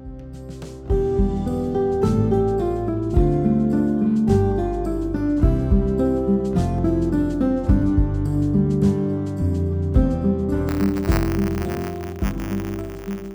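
A steady robotic 100 Hz rattle runs from 10.68 s to the end: buffer tearing, where writer and reader cross, splicing in a small slice of audio from about 30 ms earlier.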